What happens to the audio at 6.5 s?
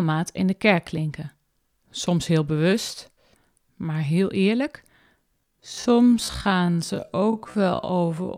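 At 6.5 s the speech is inside a time-stretched section running from 5.38 s, just after "maar heel eerlijk", to the end at 8.37 s. It plays at half speed with unchanged pitch and drags, likely from software repeating short pieces to lengthen it.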